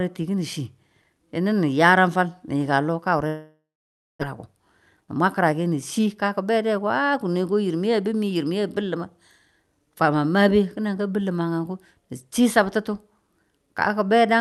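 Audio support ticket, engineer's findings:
Long network dropout, 3.27 to 4.23 s. Last sound smeared into a fading buzz, then about 0.56 s of near-silence; roughly 0.6 s of speech never comes back. Likely a stall on the network side, with the receiver concealing the gap.

Jitter buffer speed-up, 5.01 to 7.15 s. Speech runs about 14% fast at unchanged pitch, sounds a bit rushed. Buffer catching up, trimming pitch-period chunks until roughly a third of a second is gone.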